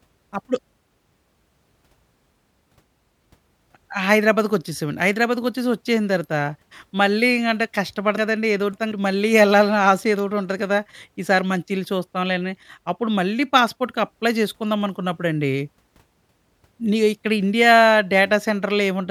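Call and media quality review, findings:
Chunks out of order, 8.17–8.92 s: one 186 ms chunk delivered three chunks late, so the speech jumbles briefly, with three hard joins.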